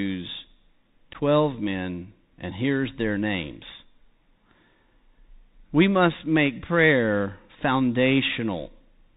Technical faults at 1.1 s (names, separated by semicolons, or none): Bluetooth CVSD headset codec; unconcealed Bluetooth headset packet loss